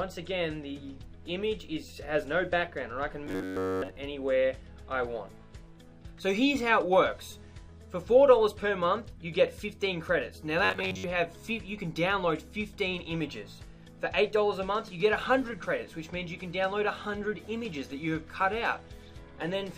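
Robotic sound from repeated short buffers at 3.27 to 3.96 s and 10.65 to 11.04 s: a rigid, metallic buzz near 94 Hz, likely from an audio fragment of about 11 ms being looped while most of the real signal is skipped.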